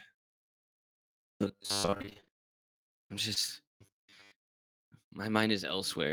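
From 1.12 to 2.58 s the sound takes on robotic sound from repeated short buffers. Fresh audio is likely arriving too slowly, so the playback repeats a roughly 10 ms slice over and over while most of the real signal is skipped. That fixed repeat stamps a 100 Hz buzz onto everything, giving a stiff metallic drone that only loosely tracks the speech. On a spectrogram it appears as evenly spaced horizontal bands at multiples of 100 Hz. The waveform shows near-identical 10 ms cycles.

Inside that stretch, from 1.81 to 2.33 s, repeated packet loss (robotic sound) makes it worse. A rapid run of short gaps, the longest about 25 ms, is each patched by extending the last sound, so about half this span is filler. It sounds choppy and clipped. On the spectrogram the harmonics smear flat in short blocks. In the waveform, stretches repeat with small seams between them.

A short concealed packet loss at 3.34 to 3.38 s drops about 20 ms. 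The decoder bridges it by continuing the preceding sound, producing a brief smear or wobble. A spectrogram shows a thin slice where the harmonics hold still.

The robotic sound from repeated short buffers returns from 3.82 to 4.32 s with the same 100 Hz buzz, banding and repeating cycles.

Two more short concealed packet losses follow back to back, 4.53 to 4.56 s and 4.56 to 4.59 s. Each loses about 20 ms but is only partly filled, so a small hole remains. Together they give a quick double smear or wobble. The spectrogram shows two adjacent thin blurred slices, and the waveform has small dips or seams at the edges.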